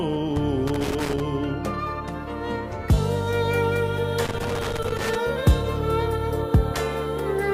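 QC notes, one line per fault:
0.67–1.20 s: loose connector crackle. A worn or dirty contact is making and breaking as it shifts, so the signal is chopped on and off at random. On the waveform this appears as jagged dropouts and sharp spikes. The spectrogram shows irregular broadband vertical streaks.
4.25–5.15 s: loose connector crackle. The same intermittent contact returns for about 0.9 s, giving an uneven scratching burst. It looks the same: spiky, gapped waveform and scattered full-band vertical lines.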